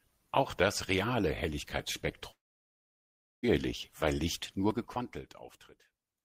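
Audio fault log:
2.31–3.45 s, long network dropout: the speech cuts off and its last sound trails briefly as a fading buzz, then about 1.07 s of near silence follows before audio resumes mid-stream. Likely about 1.1 s of audio never arrived and was concealed, so that stretch is simply lost.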